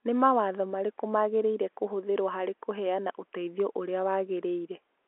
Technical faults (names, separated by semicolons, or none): none